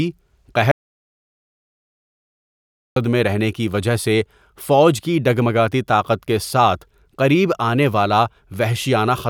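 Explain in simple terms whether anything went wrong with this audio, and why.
An audio dropout to silence cuts the speech off from 0.72 to 2.96 s, losing about 2.2 seconds, likely from the input briefly disconnecting. Unlike a natural pause, the gap has no room tone or hiss at all, just dead digital silence.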